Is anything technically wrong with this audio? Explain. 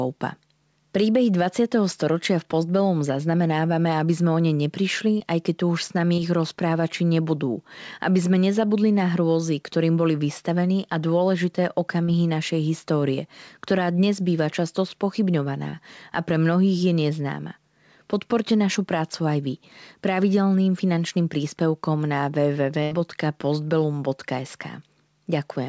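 Yes. Speech in the clip has several short dropouts, on top of a call path whose top end stops at 8 kHz, which fits a G.722 codec.

Short concealed packet loss appears at 5.18 to 5.22 s, just before "aj keď tu už"; at 12.04 to 12.10 s, between "boli vystavení a dôležité" and "našej histórie ktorá dnes"; and at 15.70 to 15.81 s, just before "a pre mnohých je". Each is a quick smear where the sound briefly wobbles. The receiver missed 20 to 40 ms of audio and filled it by extending the preceding sound before blending back in.

A burst of packet loss at 22.83 to 22.93 s sounds like a held buzz or hiss that fades before the speech picks up further on. About 80 ms went missing in a row, and the concealment stretched the last sound while lowering it, so the audio in that gap is lost.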